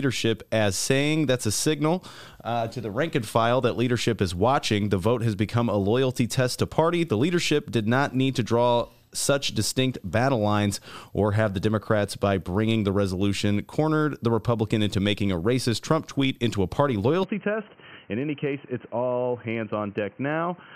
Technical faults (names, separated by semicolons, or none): input switched to a poorer device